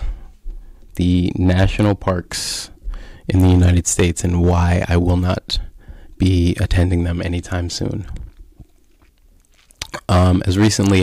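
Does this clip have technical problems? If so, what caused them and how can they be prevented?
Yes, there's hard clipping on the speech at 1.08–2.10 s, 3.30–5.54 s, 6.22–6.94 s (just before "them anytime soon") and 9.82 s to the end. The level overshoots what the stage can pass by about 4 to 10 dB, so peaks get chopped flat and pick up a harsh, fizzy edge. Leaving more headroom at the input gain, or putting a limiter ahead of the converter, would stop it.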